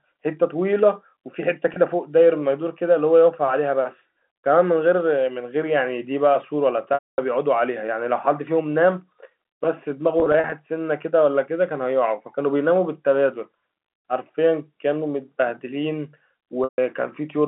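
Speech over a telephone-band line, audible as the familiar narrow G.711 sound, with four dropouts covered by packet loss with pitch repetition. At 1.74 to 1.76 s a 20 ms gap brings a brief buzzy hold. At 6.94 to 7.18 s, 240 ms is lost, so the repeated pitch cycle fades to silence before the voice cross-fades back. From 10.2 to 10.52 s, scattered losses of up to 40 ms each cause brief buzzy holds, and 16.64 to 16.78 s fades out similarly.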